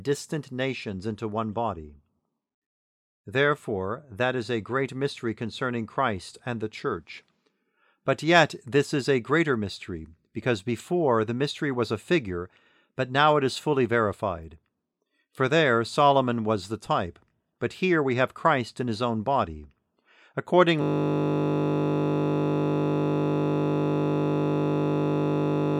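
From 20.82 s to the end, a system hang loop repeats one 20 ms buffer, giving a steady 50 Hz buzz; the spectrogram shows evenly spaced harmonic lines, the waveform an identical repeating cycle.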